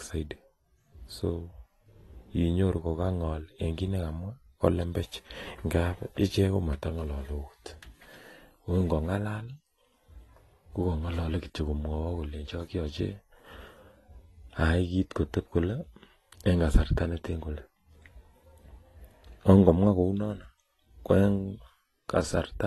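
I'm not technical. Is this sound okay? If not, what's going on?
No. AAC compression damage runs through the whole clip: the speech sounds dull and smeared, with a fizzy, warbling edge on hissy sounds like s and sh, and nothing is left above about 12.1 kHz. The likely cause is saving the audio too small. To shrink the file, the encoder drops the highest frequencies and coarsely approximates detail it judges hard to hear, and at this squeeze those shortcuts become plainly audible.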